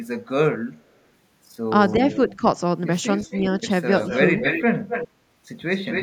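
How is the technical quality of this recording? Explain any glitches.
The recording has two related faults from a speakerphone-style connection: repeated echo leak and a brief moment of speech suppressed in double talk.

Echo leak, at 1.89–1.93, 2.11–2.37, 3.17–3.41, 3.98–4.18, 4.41–4.64, 4.88–5.08 and 5.79 s to the end: the far end's echo canceller likely failed to remove its loudspeaker pickup. The first scrap returns 382 ms late and the rest 256 ms late, growing from about 25 dB down to about 5 dB below the speech.

Speech suppressed in double talk, at 2.37–2.41 s, right as an echo burst ends: with both sides active, the canceller likely ducked the talker along with the echo. Level dips by roughly 5 dB for about 40 ms.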